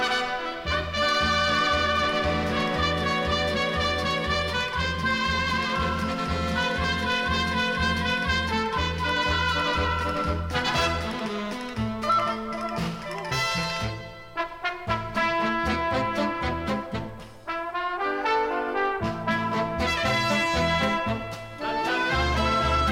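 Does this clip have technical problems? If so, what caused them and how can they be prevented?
No, this clip has no technical problems, so there is nothing to trace to a cause or prevent.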